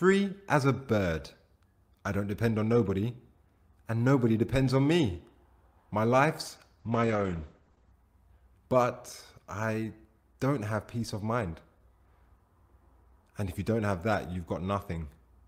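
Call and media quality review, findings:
Call bitrate drop, 6.81–7.99 s. Bandwidth estimate collapsed and the encoder was throttled hard, consistent with Opus falling from roughly 40 kbps to around 10 kbps. Audio bandwidth narrows from 20 kHz to 8 kHz, so highs vanish and the sound turns muffled and coarse, bottoming out for about 1.1 s before full-band quality returns.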